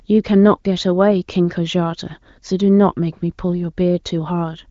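No technical faults can be heard anywhere in the speech. Nothing reaches above about 7.5 kHz, which points to the AMR wideband (HD Voice) codec running at a high rate, and its coding damage is faint at most.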